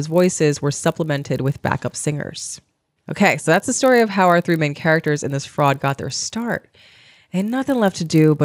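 A steady 50 Hz buzz rides under the speech throughout: the resampler restarted on every 20 ms block converting 24 kHz to 48 kHz, leaving an error at each block edge.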